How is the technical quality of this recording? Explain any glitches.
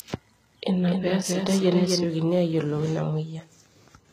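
The recording has two audible faults: codec damage throughout and a doubled track over the first two seconds.

From start to finish, the speech carries gritty, metallic sibilants and nothing above 14.9 kHz, most likely from HE-AAC compression at a low bitrate around 20 kbps. The treble is synthesised by copying lower bands upward, so its harmonics misalign with the true spectrum.

From the start to 2.04 s, a doubled audio track is present: a second full-band copy, roughly 5 dB quieter, trails by about a third of a second with no reverb colour, then cuts off abruptly. This is likely a second capture through a slower path.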